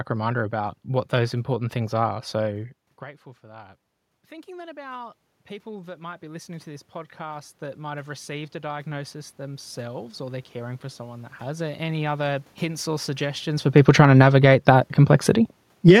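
A speech clip in which automatic gain rising follows the talker moving away from the microphone at around 2.5 s: from 3.41 to 11.92 s the control slowly adds about 16 dB to make up an input drop of about 21 dB, ending just before "other hints or suggestions". On a waveform the envelope widens steadily over those eight and a half seconds, and the room noise floor in the spectrogram brightens along with the voice. Automatic gain falling then pulls the level down by about 8 dB from 13.71 to 14.44 s, starting after "hints or suggestions for" and following the talker moving at around 13.5 s. A brief rise of about 4 dB from 14.18 to 15.0 s overlaps this dip, and a second fall of about 6 dB runs from 15.31 to 15.96 s. These moves show as the envelope and the background shading pumping together within a second or less.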